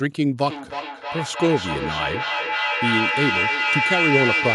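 From 0.44 s to the end, feedback echo between two devices. A second device's microphone picks up the speech and sends it back. Each word returns about every third of a second. The repeats reach about 1 dB below the speech.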